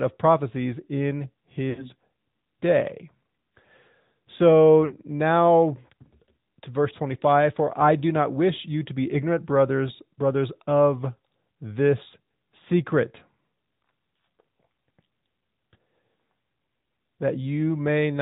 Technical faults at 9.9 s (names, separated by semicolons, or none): AMR narrowband mobile codec